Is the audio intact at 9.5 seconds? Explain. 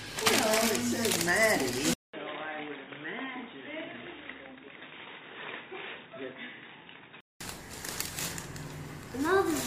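Yes, the audio at 9.5 seconds is intact, with no audible dropout, click, distortion or other fault at that moment.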